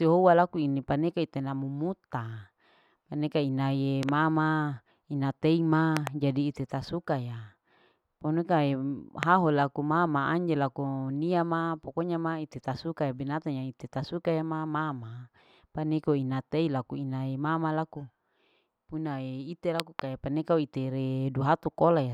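Loud pops hit at 4.03–4.11 s, 5.97–6.09 s before "jadi ite ta suka", 9.23 s, and 19.80–20.01 s after "unae ite". All are sharp double pops except a single one at 9.23 s, jumping well above the speech, which carries on underneath. A likely cause is voltage spikes from a switch or static.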